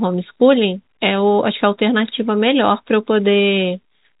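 No technical faults can be heard in this speech clip. It carries the narrow band of G.711 telephone coding, with nothing above 4 kHz and at most a faint hiss that rises and falls with the speech level.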